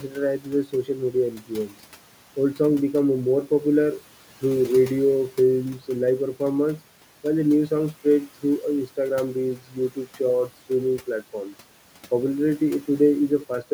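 Speech cut by the noise suppressor occurs at 0.01–0.17 s, 0.39–1.15 s, 1.31–1.75 s and 9.57–10.07 s, the last just before "shorts streaming platforms". The suppressor mistook quiet speech for noise and turned it down by up to about 13 dB, leaving brief stretches swallowed and faint.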